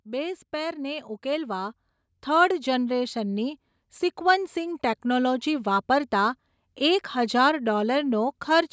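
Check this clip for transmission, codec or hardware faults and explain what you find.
One fault is present: automatic gain rising, from 0.05 s to 5.79 s. The call's automatic gain control judged the microphone input too quiet and raised its gain steadily, by about 12 dB over those 5.7 seconds. Because the gain acts on the whole signal, the speech and the background noise swell together. The speech grows louder and the background noise rises with it. The call microphone processing limits the band to 8 kHz.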